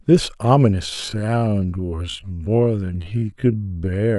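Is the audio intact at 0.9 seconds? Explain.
No. At 0.9 seconds the speech falls inside a time-stretched section that runs from 0.84 s to the end of the clip at 4.18 s. The pace drops abruptly to about 0.53 times normal speed while the pitch stays where it was. The likely cause is software lengthening the audio by repeating short slices to hold the pitch, which leaves the slowed speech dragging.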